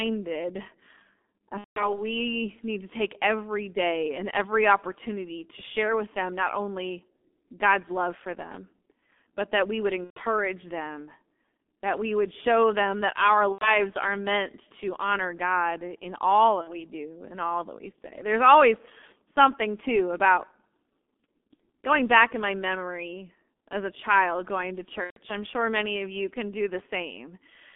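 From the start the whole clip carries the G.723.1 codec at 6.3 kbit/s, heavily squeezed into a 250 Hz to 3.5 kHz band, so the speech is muffled and hoarse, consonants smeared by the slow-updating voice model. VoIP packet loss concealed by the speech codec hits at 1.58–2.03 s, 10.04–10.21 s after "but that we would", 13.52–13.79 s between "show them that our" and "are meant to honor", 16.61–16.85 s, 21.53–21.60 s just before "going back in my", and 25.04–25.18 s. The decoder fills 60 to 180 ms gaps, which fits runs of 30 ms frames, by stretching the last sound into a fading buzzy tone or coloured noise, and the voice stays weak briefly after each gap.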